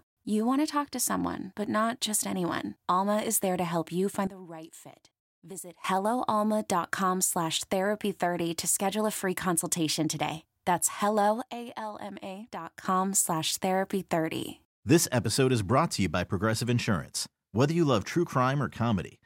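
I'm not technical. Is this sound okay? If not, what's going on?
No. At 4.27 s, right after "to help you find", and again at 11.42 s, the speech and its background hiss drop abruptly together, then jump back at 5.84 s and 12.85 s. That instant step, rather than a gradual fade, marks a sudden gain jump, likely a volume setting applied without smoothing.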